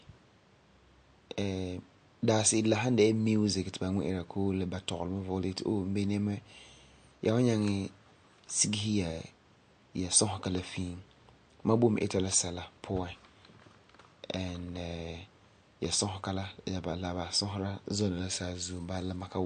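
Throughout the speech, the treble stops dead at 9 kHz and the sound has a watery, swirling quality with smeared consonant attacks. This is likely MP3 compression at a low bitrate, around 48 kbps. Starved of bits, the encoder removes the highs and switches weak frequency lines on and off. A spectrogram would show a flat ceiling at 9 kHz and flickering, patchy gaps below it.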